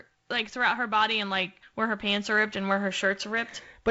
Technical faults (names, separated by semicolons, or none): none